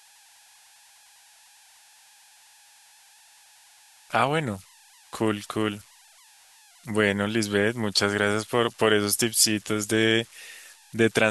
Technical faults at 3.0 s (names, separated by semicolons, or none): converter idle tones